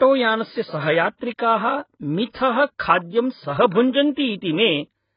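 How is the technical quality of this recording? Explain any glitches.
Quality is poor throughout, with heavy codec damage across the whole speech recording. AAC compression is the likely cause. Nothing survives above 5 kHz, and the dull, smeared sound points to AAC-LC at roughly 12 kbps, where too few bits force the encoder to discard high bands and coarsely quantise the rest. Unlike a clean low-pass filter, it leaves a warbling, fizzy texture on sustained sounds and sibilants.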